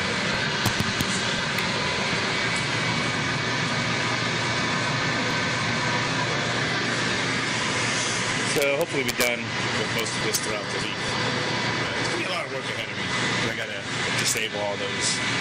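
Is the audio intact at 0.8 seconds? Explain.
No. At 0.8 seconds the audio is broken by violent, harsh cracks on the loudest moments, far sharper and more abrasive than ordinary clipping, running from 0.66 to 1.01 s. This is integer overflow: the signal was pushed about 3 dB beyond the largest value the integer format can hold, and instead of being limited, each peak that crossed the ceiling wrapped around to the opposite extreme, snapping across the full range.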